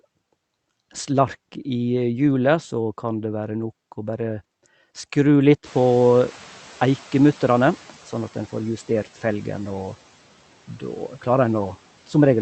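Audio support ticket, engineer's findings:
Background noise jumps up around 5.5 s and passes through under-suppressed, then fades down over 5.65–8.28 s. Noise suppressor catching up: room noise rose about 24 dB suddenly and the suppressor's noise estimate lagged, taking 2.63 s to adapt and pull the floor down by about 7 dB. Steady noise sits roughly 25 dB below speech afterwards. Band-limited to 8 kHz throughout, consistent with an Opus call path at 64 kbps.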